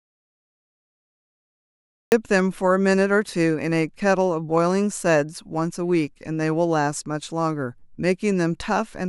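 An audio dropout to silence runs from the start to 2.12 s: silence with no room tone, likely from lost input, before the speech cuts in mid-flow.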